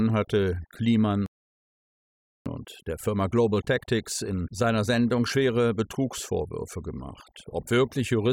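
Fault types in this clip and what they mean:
Overdone noise removal: Throughout, heavy noise reduction strips bands near the noise floor, leaving near-silent background with twinkling specks.
Playback stall: The audio stops dead from 1.26 to 2.46 s, about 1.2 s of silence, likely because the player ran short of data.
Time-compressed catch-up: From 2.46 to 5.46 s the speech runs about 1.1 times fast at normal pitch. Small cross-faded cuts shorten the backlog.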